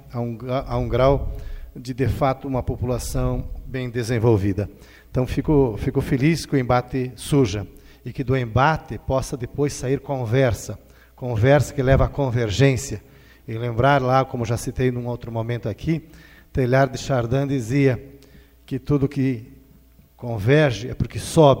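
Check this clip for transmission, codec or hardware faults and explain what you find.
I checked the clip and found no faults to explain.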